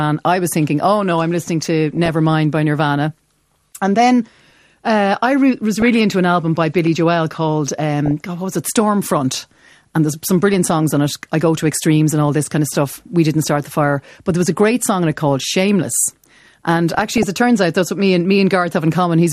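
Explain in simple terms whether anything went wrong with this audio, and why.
MP2 compression runs through the whole speech clip. It sounds dull and gurgly, likely because the encoder had too few bits and dropped or coarsened upper frequency bands.

DAB burbling occurs at 1.93–2.11 s, 5.77–5.90 s, 8.06–8.21 s, 10.53–10.71 s and 16.89–17.23 s. These are short bursts where a small share of corrupted bits put brief blips of noise into single frequency bands.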